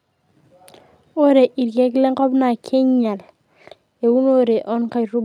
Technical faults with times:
none

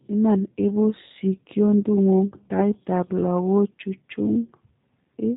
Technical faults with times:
0.00-5.37 G.729 codec

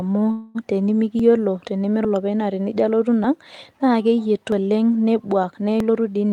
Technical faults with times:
0.31-0.57 call audio freeze
1.19 dropped buffer (overrun)
2.05 dropped buffer (overrun)
3.24 dropped buffer (overrun)
4.52 dropped buffer (overrun)
5.52-6.32 jitter buffer speed-up
5.80 dropped buffer (overrun)

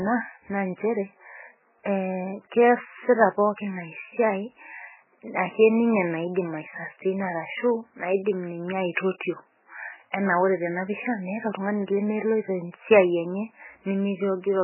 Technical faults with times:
0.00-14.63 MP3 compression

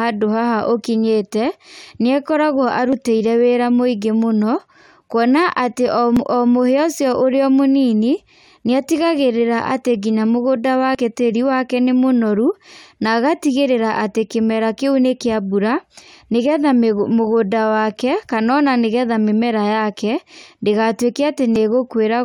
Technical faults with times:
2.93 dropped buffer (overrun)
6.16 dropped buffer (overrun)
10.95 dropped buffer (overrun)
21.56 dropped buffer (overrun)

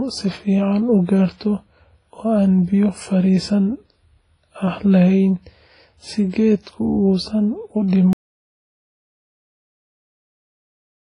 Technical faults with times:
0.00-11.16 WMA compression
8.13-11.16 audio dropout to silence

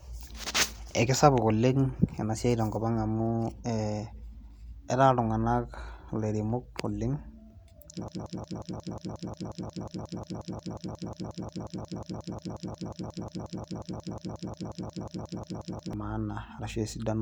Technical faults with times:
8.08-15.93 broken-record loop

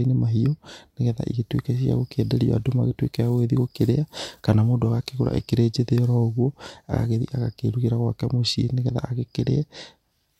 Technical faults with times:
none

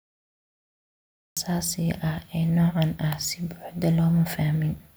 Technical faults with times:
0.00-1.37 cut-off start

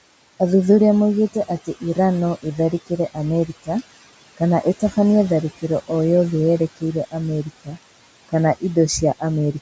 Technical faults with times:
0.00-9.62 noise suppressor artifacts
7.65-7.78 speech cut by the noise suppressor

